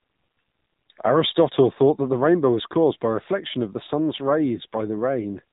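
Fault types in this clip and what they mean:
AMR narrowband mobile codec: the speech was passed through the 2G/3G mobile speech coder at a very low rate, which fits its 6.7 kbps mode. Everything above 4 kHz is gone, and the sparse vocal-tract modelling leaves the speech heavily buzzy, thin and synthetic throughout.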